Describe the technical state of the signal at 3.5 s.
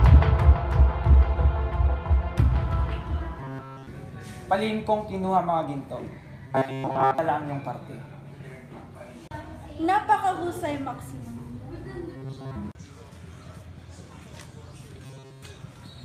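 At 3.5 s the signal is in a stretch of robotic sound from repeated short buffers, running from 3.40 to 3.87 s. New audio is likely arriving too seldom, so a fragment of about 7.5 ms is looped in place of the real material, with essentially the whole span repeated. That loop imposes a rigid, metallic buzz at 134 Hz. A spectrogram shows evenly spaced harmonics of 134 Hz, and the waveform shows one short cycle copied over and over.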